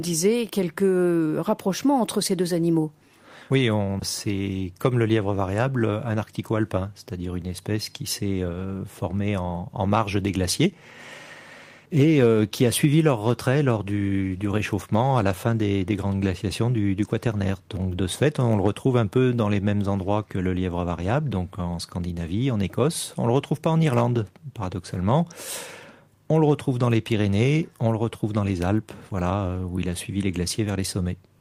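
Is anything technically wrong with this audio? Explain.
No, nothing technically wrong stood out on listening to this audio.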